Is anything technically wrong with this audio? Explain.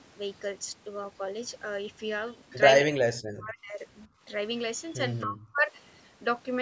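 Yes. From 2.9 to 3.81 s, and again from 5.23 to 5.72 s, the speech drops sharply, by about 40 dB in the first stretch and about 30 dB in the second. This is likely speech suppressed in double talk: with both sides talking, the echo canceller mistook the local talker for loudspeaker echo and attenuated it.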